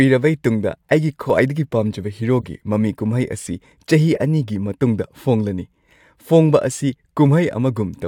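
At 1.3 s a corrupt frame is decoded. Flipped bits in one compressed frame went through the decoder unchecked. Misread codes place energy at the wrong frequencies, and a sharp blip results. It peaks at about -10 dBFS. At 2.41 to 2.46 s the same fault spans a few consecutive frames. It gives a short, quieter burst near -20 dBFS. At 4.15 to 4.18 s a couple of damaged frames produce a brief squeak at a similar level.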